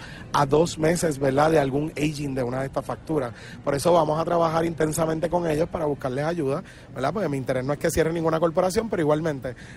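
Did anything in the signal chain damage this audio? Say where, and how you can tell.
Yes. From 0.0 to 6.0 s the audio has nothing above 12.4 kHz and heavier codec artefacts, then quality improves abruptly with no gap. This fits an adaptive stream starting at a low bitrate, roughly an Opus 16 kbit/s rendition stepping up to about 64 kbit/s, at the network and playback stage. A rebuffer or dropout would leave a silence or stall.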